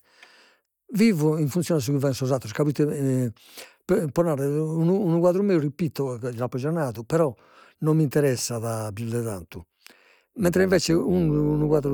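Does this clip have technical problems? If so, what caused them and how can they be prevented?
Yes. From 9.29 s, after "mi interessat pius de", to 11.94 s, overlap-add ripple gives the speech a metallic buzz of about 6 dB near 100 Hz, because frames were rejoined with windows whose overlap does not sum to constant gain. Prevent it by choosing a window and hop size that meet the constant-overlap-add condition.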